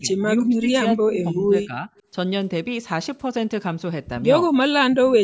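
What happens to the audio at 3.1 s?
Nothing goes wrong at 3.1 s: the speech carries on intact through that moment, with only the usual trimmed bass and the upper limit of about 8 kHz that come from call microphone processing.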